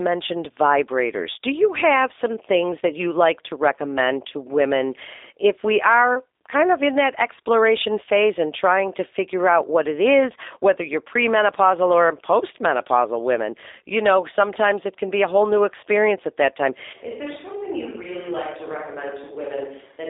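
From the first second the whole clip carries the sound of a G.729 codec, and the damage is plainly audible. Everything sits in a narrow phone-line band, roughly 300 Hz to 3.7 kHz, with nothing above 3.8 kHz, so the speech sounds boxed-in and dull. The coder rebuilds each frame from a vocal tract model plus a few pulses rather than the actual waveform, which gives the slightly rough, synthetic edge you hear, consistent with an 8 kbit/s stream.

Then at 16.93 s there's an abrupt change that holds to the end: it sounds like a switch to a distant microphone, likely because the close mic dropped out and a farther one, such as a camera's, took over. The speech jumps to about 10 dB quieter, turns hollow and roomy with thinner bass, and a bed of room noise comes up, though it stays well below the speech.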